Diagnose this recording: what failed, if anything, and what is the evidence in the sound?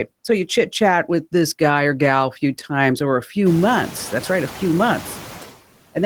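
What failed is the noise suppressor in the call processing, and its artifacts run through the whole clip. The background drops away by about 12 dB in the gaps, then climbs back under the speech as the suppressor opens up. You hear it most after the room noise jumps by about 25 dB at roughly 3.5 s, where it sits about 16 dB below the speech. The suppressor estimates steady noise band by band, frame by frame, and pulls those bands down, so the noise floor keeps following the speech.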